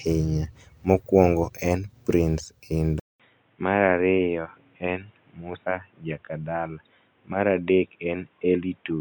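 An input switch to a poorer device is the likely cause of the change at 3.00 s in this speech recording. After a 200 ms silence the sound turns dull and boxy, with nothing above 3.8 kHz, about 5 dB quieter, over a faint new noise floor until the end.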